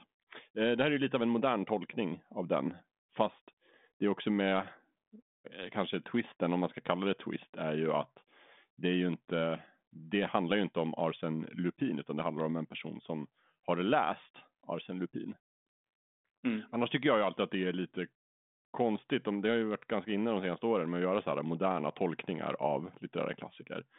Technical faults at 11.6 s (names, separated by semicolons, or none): none